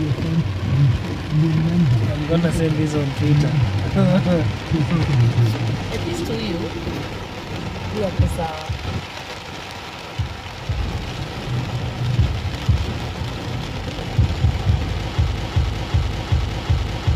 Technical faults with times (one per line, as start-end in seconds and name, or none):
15.36-17.15 broken-record loop